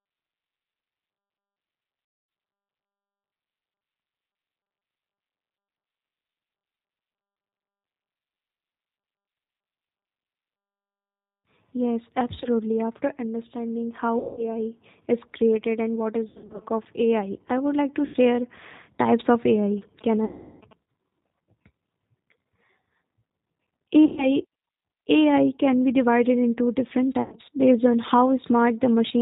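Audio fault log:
throughout: G.729 codec. The speech passes through this 8 kbit/s VoIP codec, and the damage is plainly audible. The decoder rebuilds each 10 ms frame from a vocal tract filter, a pitch predictor and a few pulses. It does not carry the actual waveform. That gives the voice a rough, slightly synthetic edge. Nothing above 4 kHz survives, so sibilants and breath sound dull and muffled.
2.05–2.29 s, 14.19–14.53 s, 16.28–16.62 s, 18.06–18.17 s, 20.25–20.61 s, 24.05–24.27 s, 27.22–27.35 s: VoIP packet loss concealed by the speech codec. Gaps of 240, 180, 240, 80, 360, 120 and 100 ms are filled by extrapolation. The decoder repeats its last pitch and filter at falling gain, so the voice stretches into a buzzy tone or coloured noise that fades. At 16.28 s the loss is scattered over 320 ms, in runs of up to 80 ms. Afterwards the voice stays weak briefly while the decoder recovers.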